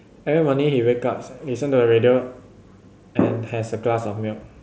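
No technical faults can be heard in this speech clip. It comes through a Bluetooth mSBC headset codec, which holds the speech to a band of about 8 kHz and leaves only a light grain on louder moments, with faint upper detail coming and going.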